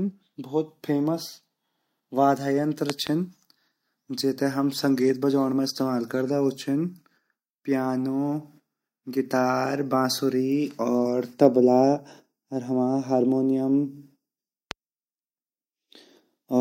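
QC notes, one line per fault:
2.90–3.09 s and 14.71–14.73 s, loud pop: a double pop followed by a single one, peaking about 20 dB and 15 dB above the speech, which continues underneath. The likely cause is a sudden voltage step or pulse, such as a plug, switch, static or driver glitch, entering the chain, where later circuits shape it into a thump. Each pop appears as a tall, narrow spike on the waveform and as a bright vertical stripe across all frequencies on the spectrogram.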